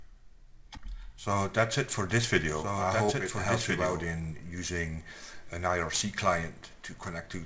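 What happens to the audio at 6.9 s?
Nothing goes wrong at 6.9 s: the audio carries on intact through that moment, with only the ordinary band limit of a wideband call path, nothing above 8 kHz.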